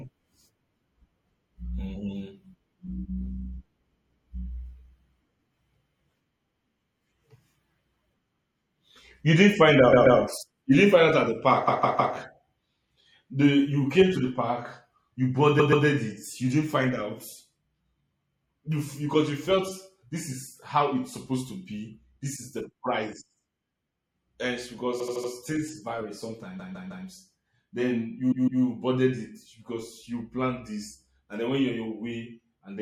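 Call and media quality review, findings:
MP3 compression, throughout: watery, swirly speech with dulled treble and metallic chirps on s sounds; consonant attacks smear. Likely cause: MP3 encoding at a low bitrate, which fits about 64 kbps. Too few bits leave weak frequency lines flickering on and off between frames. The fixed treble ceiling and frame-rate swirl set it apart from packet-loss concealment, which is intermittent and robotic rather than constant.

Repeated frames: stutter where the same chunk of sound replays back to back. Affected: 9.92–10.18 s (130.6 ms block, two extra plays); 11.67–12.14 s (156.7 ms, three extra); 15.59–15.85 s (130.6 ms, two extra); 24.99–25.30 s, just before "things vary" (78.4 ms, four extra); 26.58–27.05 s, just after "things vary" (156.7 ms, three extra); 28.31–28.62 s, just before "boarded it because you" (156.7 ms, two extra). Component: stream writer or transport resending compressed frames. 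Each repeat adds its full length, totalling about 2.1 s. Identical replays distinguish it from a dropout (silence) or an echo (decaying copy).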